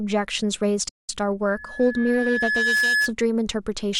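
It's a short speech clip with two separate problems. First, at 0.88 s the audio drops out in a playback stall and stays silent until about 1.10 s, roughly a fifth of a second, before picking up again where it left off. A gap like that mid-flow most likely means the player's buffer ran dry or its thread got held up, so nothing reached the output until it caught up. Then from 1.49 s there's a loudspeaker feedback squeal: a single tone at 1.7 kHz creeps in and swells over about a second and a half until it sits around 5 dB above the speech, then cuts off at 3.12 s. That's the microphone hearing the speaker it feeds. At 1.7 kHz the loop gain went past one, so that one frequency kept feeding itself and growing.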